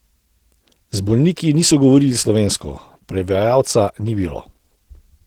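Throughout, the speech sounds muffled and hoarse, likely Opus compression at around 16 kbps in its hybrid speech mode starving the bands of bits.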